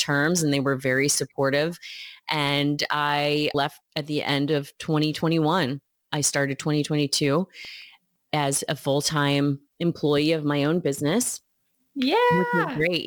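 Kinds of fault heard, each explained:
Sample clock jitter: an unstable converter clock times each sample slightly early or late, leaving an error roughly 25 dB below the sound that rises with loud, bright passages. Unlike steady background hiss, this roughness follows the speech and disappears in the pauses.
CD scratch ticks: a blemish ruins more data than error correction can rebuild, once per disc turn. Four short ticks, the longest around a millisecond and a half, fall between 7.65 and 8.16 s, before "as a full time". Their regular spacing, about six a second, sets them apart from random clicks.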